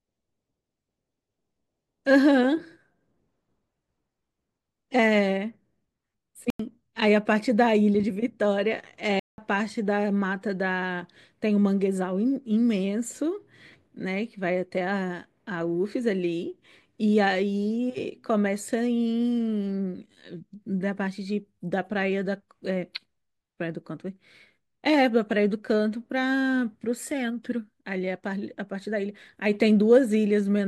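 Speech drops to digital silence twice, at 6.50–6.60 s (93 ms) and 9.20–9.38 s (186 ms), with the output cutting out and back abruptly. The waveform shows flat, near-silent gaps, and the spectrogram shows blank vertical bands. These lengths fit unfilled buffers of 4096 and 8192 samples.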